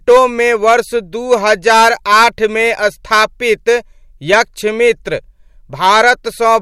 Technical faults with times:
5.84-6.56 hard clipping

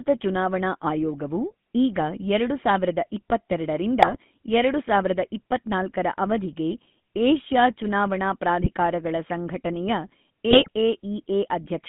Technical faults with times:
0.00-11.89 GSM full-rate codec
4.02-4.16 GSM bit errors
8.60-8.71 GSM bit errors
10.51-10.70 GSM bit errors

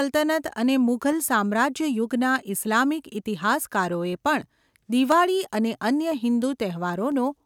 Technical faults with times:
0.12-7.12 clock drift buffer slips

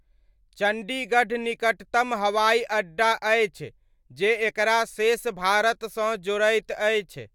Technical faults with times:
none

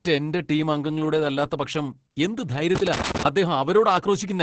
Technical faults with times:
0.00-4.43 Opus voice compression
2.75-3.25 loose connector crackle

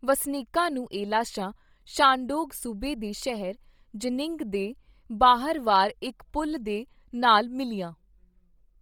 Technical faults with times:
0.00-8.81 Bluetooth LC3 compression

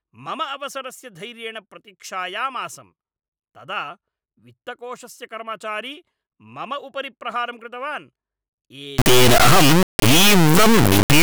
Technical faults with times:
8.98-11.22 integer read as float

